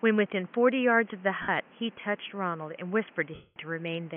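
Speech, with the room noise sitting about 29 dB under it, and two spots of lost LE Audio frames. At 1.42 to 1.49 s there's a 60 ms dropout, and at 3.34 to 3.56 s a longer one of about 220 ms. The LC3 decoder covers each gap by replaying the last good spectrum with scrambled signs, so the sound turns into a noisy smear. On the long one that fill fades out, and the audio dies away to silence before coming back.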